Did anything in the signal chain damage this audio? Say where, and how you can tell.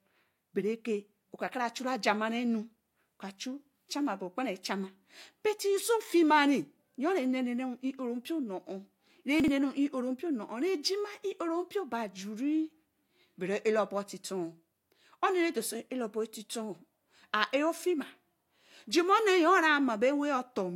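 Yes: chunks out of order at 9.40 to 9.48 s. A 40 ms chunk played one chunk late at the buffer stage, leaving a brief jumbled stretch with three hard joins.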